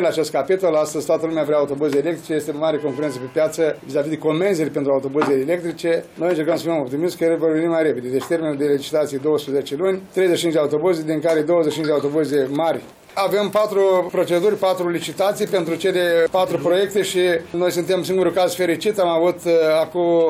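From 0.35 s to 20.27 s, a faint tick recurs about every third of a second, some seventy in all. These are clock slip clicks, likely caused by two devices running on unsynchronised clocks that drift apart by around 70 ppm, so a single sample is dropped or repeated each time the offset reaches one whole sample. The ticks are regular and small, and stand out most where the audio is loud and sustained.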